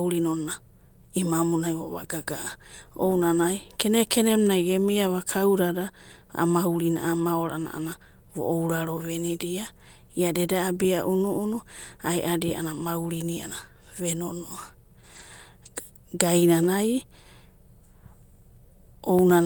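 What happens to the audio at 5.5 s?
Nothing happens at 5.5 s: the speech plays through that moment intact, with no dropout, click, distortion or other fault to be heard.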